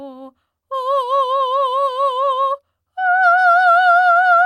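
No technical faults can be heard anywhere in this music clip. Nothing in it breaks up, drops out or shifts in a way that would point to a problem along the path.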